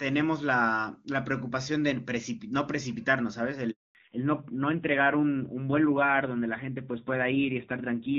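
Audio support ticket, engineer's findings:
Handover gap, 3.71 to 3.95 s. Audio fades out within a few tens of ms, then full silence for 240 ms. Probable component: radio handover between networks. No speech frames delivered during the switch; content in that window lost, not concealed.

Fallback to narrowband, 3.95 s to end. Nothing above 4 kHz after the handover; sound duller, rougher. Probable component: codec renegotiation on the new link, HD Voice (AMR-WB, clean before the gap, which fits a top-rate mode) dropping to narrowband AMR, roughness pointing to a mid-low rate around 7.4 kbit/s.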